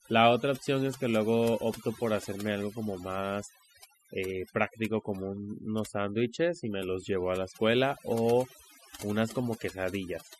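Throughout the speech, overdone noise removal is at work. Bands near the noise estimate are pulled far down, taking quiet voice detail with them and leaving a near-silent, twinkling background. Unlike a noise gate, the silence is uneven.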